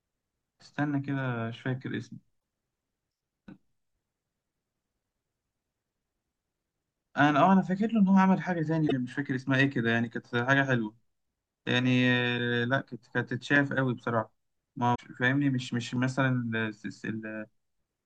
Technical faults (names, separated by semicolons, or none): broken MP3 bit reservoir